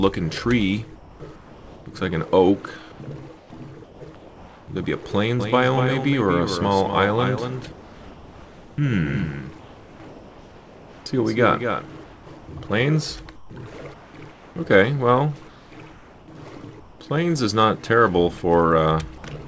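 At 0.96 to 1.86 s and again at 2.92 to 4.68 s, the pauses lose their real ambience and fill with a flat, featureless hiss for about 0.74 s and 0.88 s. That is comfort noise in place of the background. The sender likely stopped transmitting once its voice detector heard nothing, and the receiver synthesised a rough stand-in for the room. The same swap returns at 7.72 to 8.78 s, 9.60 to 11.06 s, 12.04 to 12.48 s, 13.36 to 14.56 s and 15.48 to 17.00 s. In the 7.72 s gap the substitute sits about 3 dB below the genuine background, which itself lies about 24 dB under the loud passages.

From 5.40 s to 12.84 s a second, full-band copy of the sound trails the first by around a fifth of a second, a few dB quieter. It has no reverberant tail, and it cuts in and out abruptly at those two points. This is a doubled audio track, likely from a second, slower capture path or an edit holding two misaligned copies. 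It gives everything a hard, slapback repetition.

At 11.04 s the sound returning after the comfort noise begins with a hard edge, missing roughly its first 20 ms. This is an onset clipped by the voice detector: the detector was likely slow to register that the sound had resumed, so the soft start was replaced with synthetic noise rather than sent. Throughout, the call codec path leaves nothing above 8 kHz, which fits G.722.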